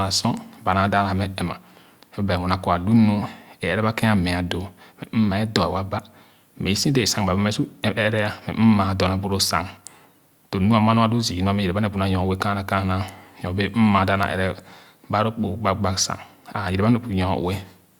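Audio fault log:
No fault is audible anywhere in the speech.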